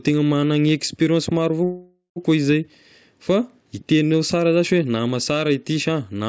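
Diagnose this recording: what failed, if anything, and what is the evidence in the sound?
A call audio freeze at 1.64–2.18 s, just after "experience maro": a fading buzz and then about 120 ms of blank spectrogram, likely a late-packet jitter-buffer underrun that inserted a 0.52 s gap.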